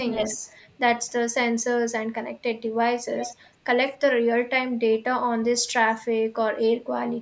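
From 0.27 to 0.49 s the speech dips by about 5 dB for roughly a fifth of a second, and from 4.08 to 4.23 s it drops much harder, by about 20 dB. Both are likely speech suppressed in double talk, the echo canceller muting its own talker while the far side spoke. On the waveform the envelope pinches inward, and the spectrogram thins or goes dark.

From 3.15 to 3.36 s a faint copy of the speech returns about 295 ms late, around 15 dB down. This is likely an echo leak from a loudspeaker whose canceller missed part of the signal. On the spectrogram it shows as a weak, delayed repeat of the preceding harmonics.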